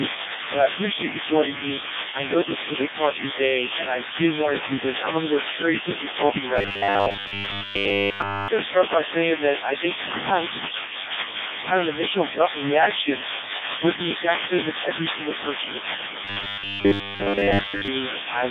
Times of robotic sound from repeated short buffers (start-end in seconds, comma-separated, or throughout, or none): 6.56-8.48, 16.25-17.88